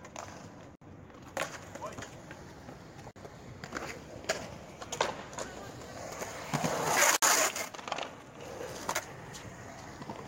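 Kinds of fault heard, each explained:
Gap at a join of encoded pieces: separately encoded segments were spliced without trimming encoder delay and end padding, so short silences cut into continuous sound at 0.75 s, 3.11 s and 7.16 s, lasting about 61, 49 and 61 ms, with smeared edges before the sound resumes.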